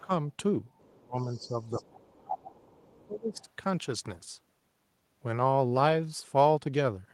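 Speech suppressed in double talk at 0.01–0.11 s, 1.02–1.59 s and 1.76–3.42 s: the level dips by about 15 to 30 dB, likely because the echo canceller turned down both talkers at once. The other side's voice leaks through faintly, about 30 to 35 dB below the speech, at 0.79–1.02 s, 1.18–2.15 s, 2.56–2.72 s, 2.94–3.06 s and 3.36–3.47 s. This is likely loudspeaker echo the canceller did not remove.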